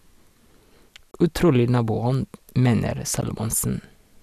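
At 1.11 to 1.14 s, the speech drops out for 28 ms. At 3.21 s, a second dropout of about 16 ms follows. Each is a gap at a join of encoded pieces. Untrimmed encoder delay and end padding leave silence between segments. The edges are smeared by the codec, and the sound resumes where it stopped.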